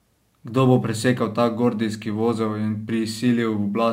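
Sample clock jitter runs through the whole speech clip. The converter's clock wanders by a few microseconds, so samples land early or late. Steep waveform slopes suffer most. A faint hiss, about 35 dB down, roughens loud, bright sounds and vanishes in pauses.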